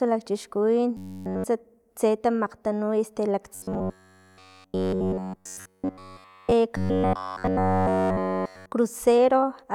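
The speech turns into a robotic sound from repeated short buffers three times: 0.97 to 1.44 s, 3.55 to 6.52 s, and 6.77 to 8.72 s. In each stretch the voice collapses into a hard, metallic buzz locked at 93.8 Hz, loosely tracking the syllables. That's likely new audio arriving too late, so playback keeps looping a roughly 10.7 ms slice in place of essentially all the real signal.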